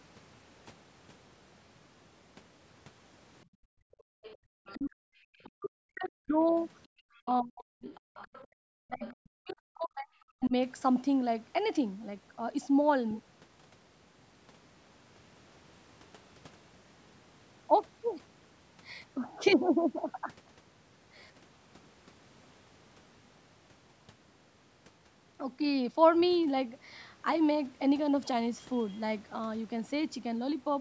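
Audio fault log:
3.45–4.47 s, 6.87–6.95 s and 8.47–8.59 s, background gated by the echo canceller: the room sound falls away abruptly and comes back. The first gap lasts about a second and dips by about 39 dB. The two later ones are brief, around 70 ms and 100 ms, and drop by about 35 and 36 dB. Each time, the echo canceller heard the loudspeaker playing and clamped the microphone hard. Ambient noise vanished with it until the canceller released.
4.24–5.49 s, 7.15–9.14 s and 10.44–10.48 s, other side's voice leaking through: a faint second voice sits underneath, about 25 dB below the main talker in the first two stretches and about 30 dB below in the final 40 ms scrap. This is likely far-end audio from the loudspeaker that the echo canceller failed to subtract from the microphone. The leftover comes through as a partial copy rather than being removed.
4.75–7.89 s and 8.87–10.53 s, speech suppressed in double talk: the main talker's level sinks and breaks up in pieces, at worst by roughly 40 dB, over about 2 s of the first stretch and about 1.5 s of the second. 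These spans overlap the leaked far-end voice, so both sides were likely talking at once. Unable to tell the talker from the echo, the canceller pulled everything down. Within the 8 kHz band the call processing leaves, the voice goes patchy.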